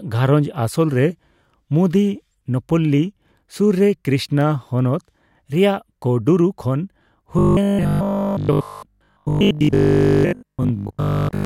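Robotic sound from repeated short buffers from 7.39 s to 11.45 s, after "ᱦᱚᱱᱚᱛ ᱨᱮᱭᱟᱜ ᱠᱳᱰᱩᱨᱩ ᱠᱷᱚᱱ": a rigid 50 Hz metallic buzz, likely from 20 ms chunks replayed in place of most missing audio.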